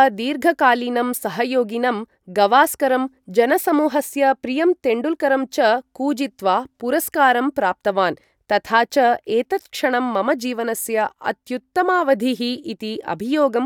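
Nothing goes wrong anywhere in this bit of speech, so there's simply no technical fault to point to.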